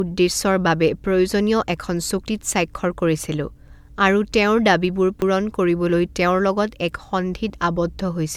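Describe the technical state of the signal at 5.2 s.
At 5.22 s there is a single skip: roughly 40 ms of speech is missing, and the audio on either side is butted together with no silence between. This is audio missing between chunks, likely caused by a recorder or processor handling the signal in 3-second blocks and dropping a sliver at the changeover. Unlike a dropout, which leaves a gap of silence, this removes time outright, so the speech jumps forward abruptly.

Underneath, and running through the whole clip, the audio has a swirly, hollow, smeared quality, and its attacks are blurred. That is generation loss, likely from repeated lossy re-encoding. The character fits about five passes through an MP3 chain at 128 kbit/s, with each pass quantising again on a shifted frame grid. A single encode at that rate would sound far cleaner. The damage here comes from artefacts stacking up across passes rather than from a band-limit, since content is only cut above about 20 kHz.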